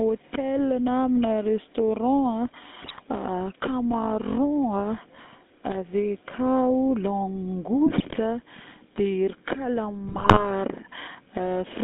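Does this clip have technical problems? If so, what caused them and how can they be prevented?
Yes. The speech has passed through the GSM full-rate codec: the band runs only from about 200 Hz to 3.7 kHz, and the voice carries a buzzy, gravelly roughness from pulse-driven vocal-tract modelling, which fits 13 kbps full-rate coding. A spectrogram shows a hard ceiling near 3.7 kHz with coarse, smeared harmonics. Using a wideband or modern codec end to end prevents this.

GSM bit errors break through at 2.82–3.04 s, 7.86–8.17 s and 10.04–10.46 s as squawks, pops and gargling, where corrupted filter, pitch or gain values distort individual frames. The waveform shows sudden level bursts, and the spectrogram shows blotchy, misplaced energy. A stronger radio link or better error protection prevents them.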